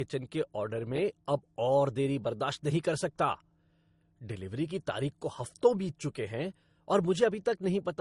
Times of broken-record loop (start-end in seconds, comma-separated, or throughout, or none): none